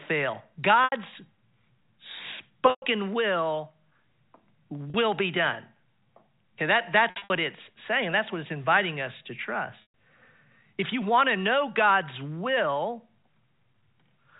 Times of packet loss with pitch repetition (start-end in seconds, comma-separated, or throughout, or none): 0.84-0.92, 2.70-2.82, 4.90-4.94, 7.10-7.30, 9.82-9.90